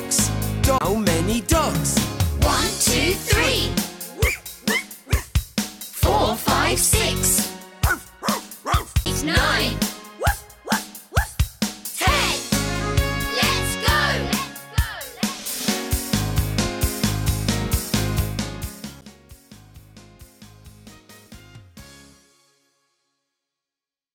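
CD skips occur at 0.78 to 0.81 s, 9.05 s and 19.01 s: each gives a mute of roughly 10 to 20 ms, then the audio resumes from a different point on the disc's spiral. Unlike a gradual fader-style level change, a skip cuts abruptly and jumps in time.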